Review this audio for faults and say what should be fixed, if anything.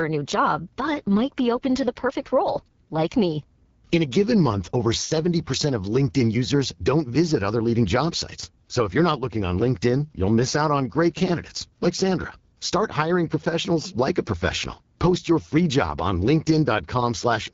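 The whole clip runs through an AMR wideband (HD Voice) codec, and the damage is plainly audible: the speech sounds rough and raspy, which fits one of its two lowest modes, around 8.85 kbit/s. At that rate the pulse-driven vocal tract model can't follow the voice closely, and the 6.4 to 7 kHz band is just shaped noise. To prevent it, encode at 12.65 kbit/s or higher.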